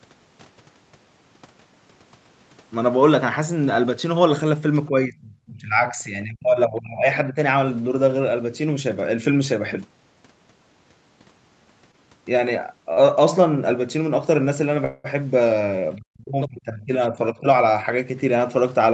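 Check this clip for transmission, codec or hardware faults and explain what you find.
Four kinds of fault turn up: echo-canceller problems in two stretches, two short late-packet stalls, and one longer freeze, all within speech that is band-limited to 8 kHz by its call path.

Speech suppressed in double talk appears from 4.89 to 7.07 s, again from 7.29 to 7.37 s, and from 15.97 to 17.47 s. The likely cause is the echo canceller mistaking simultaneous far-end talk for echo and pulling the near talker down with it. About two seconds are affected in the first stretch, with dips reaching roughly 30 dB. The 7.29 s dip is brief and shallower, about 10 dB. The last stretch covers about a second, with dips near 35 dB.

The other side's voice leaking through shows up in the same two stretches, most likely because the echo canceller left some loudspeaker sound in the microphone signal. From 5.99 to 6.03 s the scrap is very faint, about 40 dB under the talker and barely there. 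From 16.41 to 16.48 s it is much stronger, only about 15 dB down, and comes through as a short fragment of a second voice.

A short stall from a late packet occurs at 11.91 to 11.95 s and again at 12.93 to 12.99 s. Each time a packet missed its slot, the jitter buffer ran dry, and the receiver stretched the last sound until the data arrived. The first hold lasts 18 ms and the second 37 ms. Nothing is lost, but the sound hangs momentarily before carrying on.

A call audio freeze runs from 14.85 to 15.06 s. Its likely cause is a longer hold-up in delivery that emptied the jitter buffer. The receiver bridged 194 ms by extending the last sound without dropping into silence. The audio then resumes exactly where it stopped. The effect is an inserted pause rather than missing speech.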